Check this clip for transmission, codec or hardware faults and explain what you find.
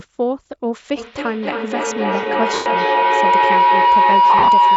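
Two problems stand out in this speech recording: a feedback howl that takes over most of it, and two patches of lost LE Audio frames.

The feedback howl starts at 0.97 s and runs to the very end. It sounds like two devices in the same room on one call, with the microphone picking up the loudspeaker and sending it round again louder each time. The loop locks onto a tone around 1 kHz, pulsing roughly every third of a second. At its peak it sits about 9 dB above the speech, and nothing breaks the loop before the clip stops.

The lost LE Audio frames show up at 2.54 to 2.66 s, a solid 120 ms dropout, and again from 4.30 to 4.48 s, where 100 ms of loss is scattered over 180 ms in short bursts, the longest around 30 ms. The LC3 decoder fills each gap by reusing the last spectrum with scrambled signs, so the howl's tone turns into a hissy smear. Over the longer gap that smear fades toward silence. 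The 120 ms gap fits about a dozen 10 ms frames going missing. The call's microphone processing, which leaves nothing above 8 kHz, is working as intended.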